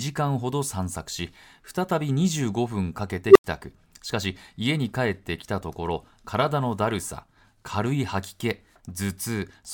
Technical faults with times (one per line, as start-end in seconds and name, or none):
3.27-3.44 unstable filter